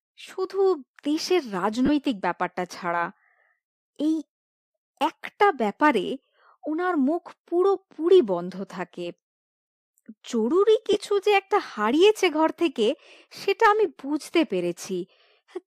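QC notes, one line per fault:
1.86–1.89 s and 10.93–10.96 s, lost LE Audio frames: brief gaps of about 30 ms and 20 ms, which fit three and two missing 10 ms frames, likely from an LC3 link. The decoder refills each gap with the previous spectrum under scrambled signs, so the speech smears into a short noisy blur.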